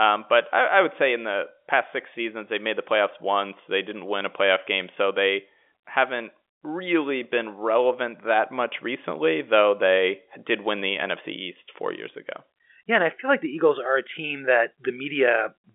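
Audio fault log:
Nothing to log here, since the speech simply carries the usual narrow band of G.711 telephone coding, roughly 300 Hz up to 3.5 kHz with nothing above about 3.7 kHz.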